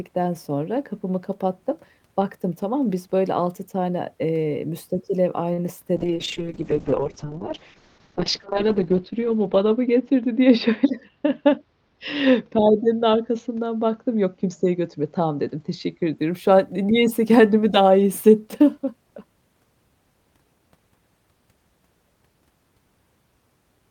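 At 5.53 s a short stall from a late packet holds the speech for about 46 ms, to 5.60 s: the jitter buffer ran dry and the last sound was stretched until the packet arrived. On a waveform the held segment repeats; a spectrogram shows briefly frozen harmonics.

From 5.97 s to 16.24 s a call bitrate drop takes the coding from 32 kbps to 6 kbps, lowest for about 2.6 s. The speech turns rough and muffled as the spectrogram's upper edge falls from 20 kHz to 8 kHz, leaving blank space above.

Inside that stretch, from 10.46 s to 11.10 s, a jitter buffer speed-up plays the speech at 105% by cutting pitch-period slices, roughly 40 ms in total, to shrink a backlog. It sounds slightly hurried at unchanged pitch; the waveform shows compressed syllables with small splice points.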